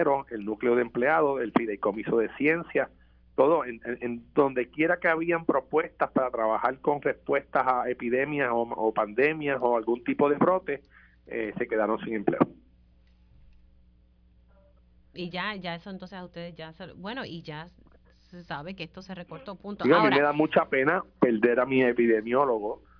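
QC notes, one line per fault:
No faults found. Nothing in this audio needed a QC entry.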